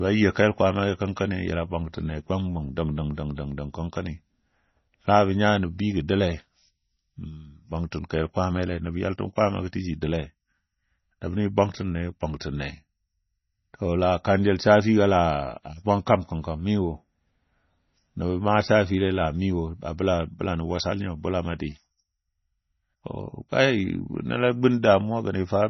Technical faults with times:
0.00-25.69 MP3 compression

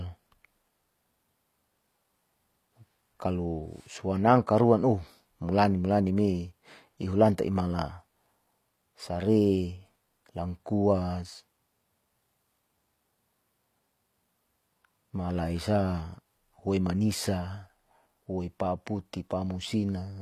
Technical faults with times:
0.00-20.21 HE-AAC compression

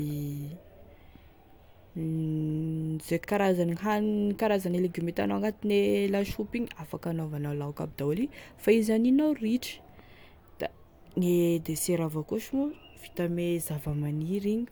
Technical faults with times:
3.23-3.28 repeated frames

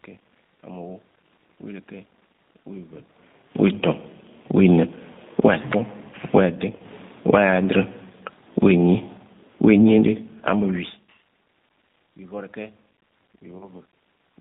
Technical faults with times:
0.00-14.41 G.729 codec
4.44-11.15 automatic gain falling
6.77-6.80 VoIP packet loss concealed by the speech codec
13.58-13.68 VoIP packet loss concealed by the speech codec

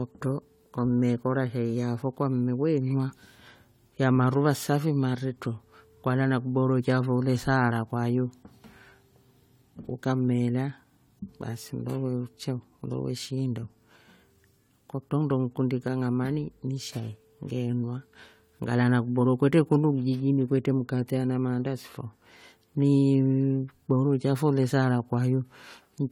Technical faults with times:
0.00-26.11 generation loss

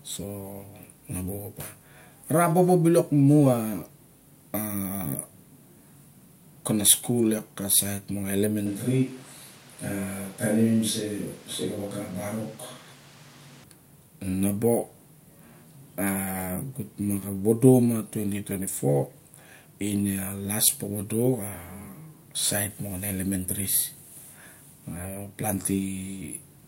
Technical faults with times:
8.66-13.64 switch to a distant microphone

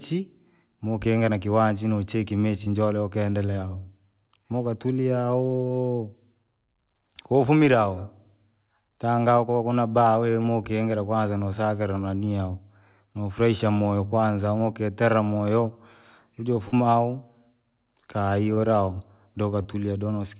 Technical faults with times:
2.64-2.68 short concealed packet loss
5.68-5.72 short concealed packet loss
10.42-10.46 short concealed packet loss
16.68-16.74 short concealed packet loss
18.54-18.58 short concealed packet loss
19.62-19.75 short concealed packet loss

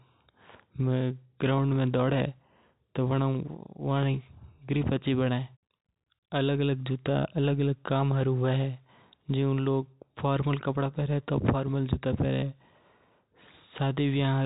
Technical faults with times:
none

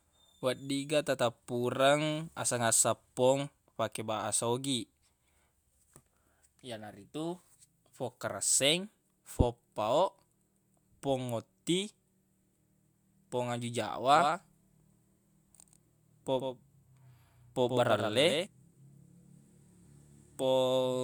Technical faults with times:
14.15-18.47 doubled audio track

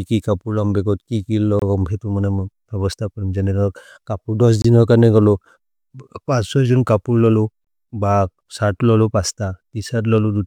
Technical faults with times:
1.59-1.62 gap between chunks
4.62-4.64 gap between chunks
7.64-7.67 gap between chunks

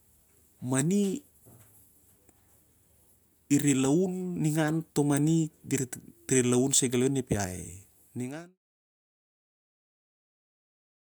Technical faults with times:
none

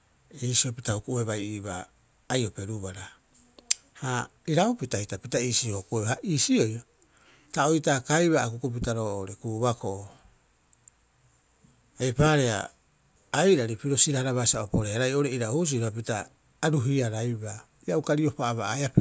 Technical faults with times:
none

